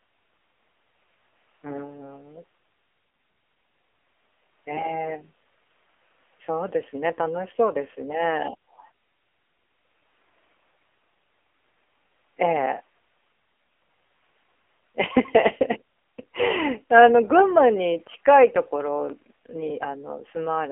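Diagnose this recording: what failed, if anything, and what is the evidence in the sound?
The fault is in the codec stage. For the full length of the speech, the sound passes through the AMR narrowband mobile codec. The band is held to a phone line, about 300 Hz to 3.4 kHz, with nothing above that. The codec damage is heavy. The voice sounds buzzy and synthetic, which fits the low 5.9 kbps mode. The codec models the vocal tract from a pitch predictor and a few pulses per 5 ms. At this rate it keeps only a coarse sketch of the voice.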